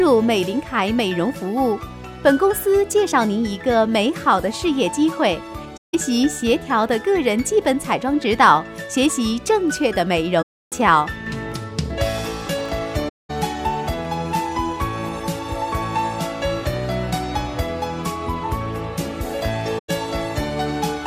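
At 5.76 s and 10.42 s, AAC frame loss with muting occurs. The decoder replaces the missing frames with silence, and the overlapping windows fade the sound out and back in, leaving soft-edged holes of about 171 ms and 299 ms. From 12.19 to 12.69 s, processor overload crackle sets in. The processor repeatedly misses deadlines on very small buffers, around 1.5 ms each. Each missed buffer drops to silence, and the hard-edged gaps build into a short burst of gritty crackle over the sound. The AAC frame loss with muting returns at 13.08 s and 19.78 s, with muted stretches of about 213 ms and 107 ms that fade out and in smoothly.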